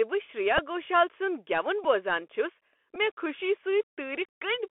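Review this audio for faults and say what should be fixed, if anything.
The Bluetooth CVSD headset codec runs throughout: the one-bit, 64 kHz delta coder leaves the speech confined to roughly 300 Hz–3.4 kHz with scratchy sibilants and granular hiss. A spectrogram shows a hard ceiling near 3.4 kHz over a grainy noise floor.

A Bluetooth headset packet repeated at 0.58, 1.84 and 2.95 s. Each time, about 7.5 ms of lost audio was replaced by re-decoded earlier bits, which fits two repeated packets and produces a brief buzz near 267 Hz. The waveform shows a short duplicated segment with a discontinuity at each edge.

To prevent both, record through a wideband (mSBC) or wired microphone path with a strong, uncongested radio link.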